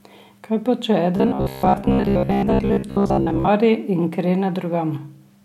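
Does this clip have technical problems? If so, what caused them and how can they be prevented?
Yes. Between 1.17 and 3.49 s, new audio likely arrived too seldom, so playback kept looping a short block, which fits a 15 ms buffer, over most of the real audio. This robotic sound from repeated short buffers locks the speech into a rigid, metallic 66.7 Hz buzz that only loosely follows the words. To prevent it, give the stream a larger jitter buffer and enough processing headroom that fresh audio always arrives before the current block runs out.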